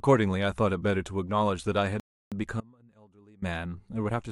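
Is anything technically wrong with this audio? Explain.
Yes, there are two faults in this speech clip.

From 2.00 to 2.32 s there is a rebuffering stall: playback starved and froze, adding 319 ms of flat, empty silence before resuming exactly where it stopped.

From 2.61 to 3.42 s there is an audio dropout to a faint residue, likely a lost signal path. The level falls abruptly to a faint trace about 25 dB down, showing as a sudden, nearly blank band.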